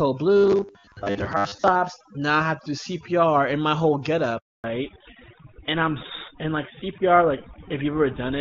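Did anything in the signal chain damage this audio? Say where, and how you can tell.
Yes. Overdone noise removal runs through the whole clip, at the call-processing stage. The background drops and breaks up into twinkling specks. This is not codec roughness: individual frequency bands are being gated out wherever they approach the estimated noise floor.

From 0.37 to 1.68 s there is robotic sound from repeated short buffers, at the driver or buffer stage. The speech becomes a rigid metallic buzz at 100 Hz. That points to a 10 ms block being looped in place of much of the real audio, likely from starved buffer delivery. Unlike codec rasp, the pitch is fixed.

A handover gap at the network stage runs from 4.38 to 4.64 s, a 260 ms silence. The sound falls away within tens of milliseconds and then nothing arrives. A dropout from a loose cable would crackle, but this is a clean absence of frames while the link switched.

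Fallback to narrowband at the codec stage starts at 4.64 s, right after the gap, and lasts to the end. Nothing remains above 4 kHz, and the speech turns duller and rougher. This fits a switch from HD Voice to GSM full rate, not a gradual low-pass filter.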